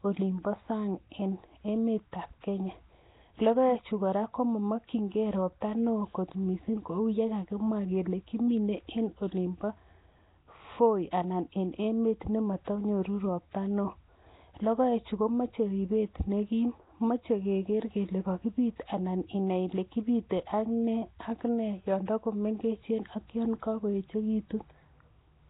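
Speech, with Nellymoser compression throughout. The sound is rough and hissy, with a smeared, underwater quality. Nothing is heard above 3.8 kHz. This is likely heavy Nellymoser Asao coding, which fits a 16 kbps stream. Weak bands get no bits and are replaced with noise.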